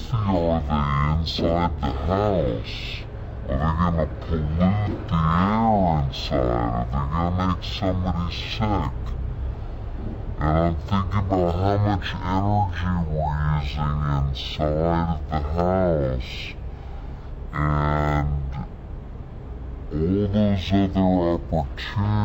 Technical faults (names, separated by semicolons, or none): stereo read as mono